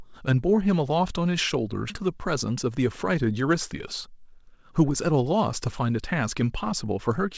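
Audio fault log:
1.90–1.92 s, skip ahead: the sound jumps forward abruptly with no gap. Around 0.4 s of audio was dropped, and the two sides join almost directly.
2.00–3.09 s, jitter buffer speed-up: speech runs about 7% fast at unchanged pitch. Short pitch-period pieces were repeatedly cut to drain excess buffered delay, roughly a tenth of a second.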